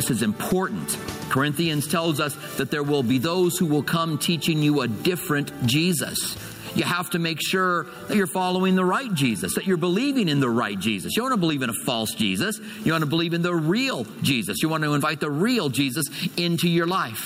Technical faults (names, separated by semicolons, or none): gain pumping